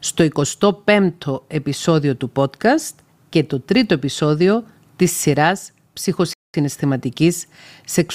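A speech recording with one rebuffering stall: at 6.33 s the sound drops to silence and holds there until 6.54 s, then picks up exactly where it left off. The player has run dry of downloaded audio and waited for more, so nothing is skipped but about 0.21 s of dead air is inserted. On a waveform this shows as an abrupt flat gap; on a spectrogram, a clean vertical band of empty frequencies.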